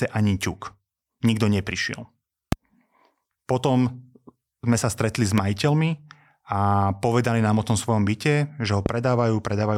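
There's a loud pop at 2.52–2.55 s, another at 5.38–5.40 s just after "sme sa stretli s", and a third at 8.86–8.88 s after "tom svojom byte že". Each is a single sharp click, roughly 15 dB above the speech, which carries on underneath. The likely cause is a voltage spike from a switch, static or a driver glitch.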